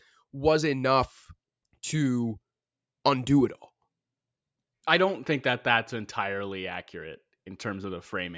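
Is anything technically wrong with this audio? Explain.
No, nothing technically wrong can be heard here.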